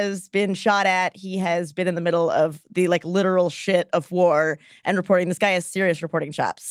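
No technical faults can be heard anywhere in the speech recording, which stays steady and intact throughout.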